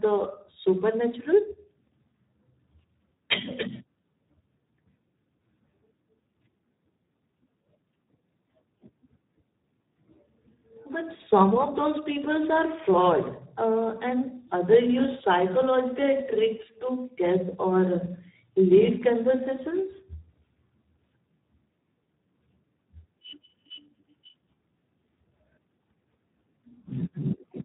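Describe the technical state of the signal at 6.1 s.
Speex codec damage is present at 6.1 s, as it is across the whole recording. Too few bits for the excitation signal, consistent with roughly an 8 kbps setting, leave the speech hoarse and noisy, with nothing audible above 3.8 kHz.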